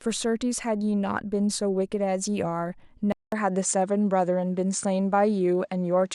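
Speech that, at 3.12 s, drops out for 200 ms and returns duller but at unchanged level, with nothing above 9.4 kHz and a faint new background noise. The gap and fresh noise floor, unlike a simple low-pass filter, point to the input likely switching to a poorer device.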